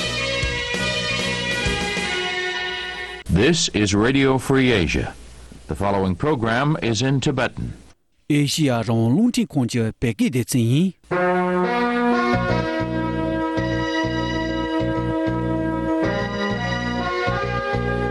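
No technical faults are audible anywhere in the recording.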